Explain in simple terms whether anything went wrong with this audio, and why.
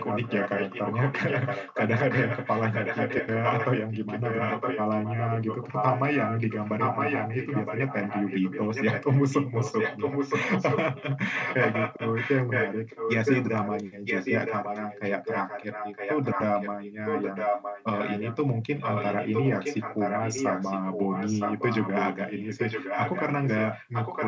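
Something did go wrong: an echo leak. A second copy of the speech comes back just under a second late, only a little quieter than the talking. It runs from the start to 18.37 s, then again from 18.8 s to the end. Likely cause: a speakerphone whose echo canceller let sound through.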